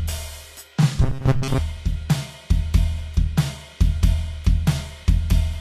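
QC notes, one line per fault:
throughout: Vorbis compression, likely at a low bitrate near 35 kbps; nothing above 14.2 kHz, and coarsely quantised treble turns hissy and grainy, blurring attacks.
1.02–1.59 s: robotic sound from repeated short buffers, a rigid metallic buzz at 134 Hz, likely from repeating roughly 7.5 ms chunks that replace most of the music.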